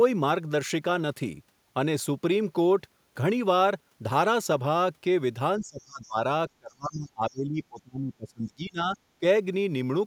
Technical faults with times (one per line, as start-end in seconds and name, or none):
5.60-6.17 speech suppressed in double talk
6.02-6.07 other side's voice leaking through
6.58-9.24 speech suppressed in double talk